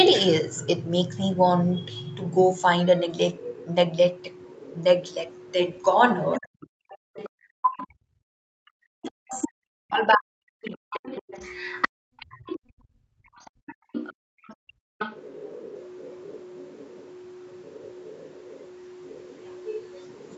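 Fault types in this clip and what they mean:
Other side's voice leaking through: A second, fainter voice runs under the speech from 0.64 to 7.87 s at roughly 25 dB below it, and again from 9.33 s to the end at about 20 dB down, likely loudspeaker playback that the echo canceller left in the microphone signal. On a spectrogram it shows as a weak, separate set of harmonic bands between and beneath the main speech.
Speech suppressed in double talk: Between 6.39 and 11.11 s, where the two voices overlap, the main speech is repeatedly pulled down, reaching roughly 40 dB at its deepest and totalling around four seconds. This is likely the echo canceller failing to separate the two talkers and attenuating both. The waveform envelope shows sudden hollows mid-phrase, and on the spectrogram the harmonics fade or break off.
Background gated by the echo canceller: From 11.89 to 14.99 s the room tone under the speech is clamped down hard while the far side is playing, dropping by about 39 dB for roughly two seconds in all before springing back. 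On a spectrogram the diffuse noise floor, which reaches up to the 8 kHz limit of the call bandwidth, turns to near-black patches. The waveform's quiet baseline flattens and then abruptly returns.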